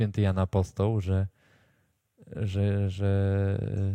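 A short speech recording, with nothing technically wrong with it.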